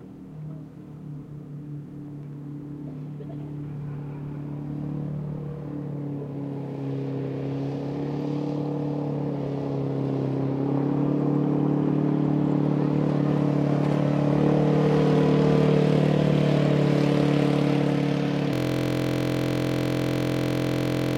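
At 18.53 s a system hang loop takes over and runs to the end of the clip. The playback side stopped being fed new data, so the sound hardware kept replaying the same stretch of its ring buffer. A 23.22 ms slice, which fits a 1024-sample buffer, repeats exactly more than a hundred times. Because the loop is so short, it doesn't stutter. It fuses into a steady buzz at about 43.1 Hz, the loop rate.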